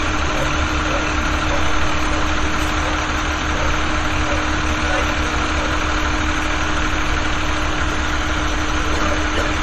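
Throughout, generation loss, likely from about seven rounds of MP3 re-encoding near 64 kbit/s, leaves swirly, hollow, smeared sound, blurred attacks and nothing above 13.9 kHz.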